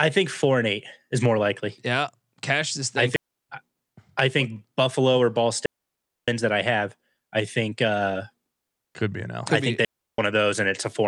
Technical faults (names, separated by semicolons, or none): digital wireless dropout